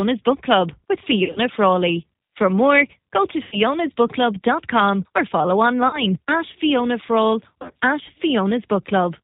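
Throughout, the speech has the rough, slightly synthetic quality of the G.729 codec, with nothing above 4 kHz. It sounds pulse-built rather than smeared and watery like an MP3-style codec, which points to a narrowband 8 kbit/s speech coder rebuilding the voice from a filter and pitch model.

VoIP packet loss concealed by the speech codec then appears at 1.24–1.40, 3.43–3.57, 5.88–6.04 and 7.62–7.72 s, each spanning roughly 100 to 160 ms. The decoder stretches the last sound into a fading buzzy tone or coloured noise instead of leaving silence or a click, and the voice stays weak briefly after packets return.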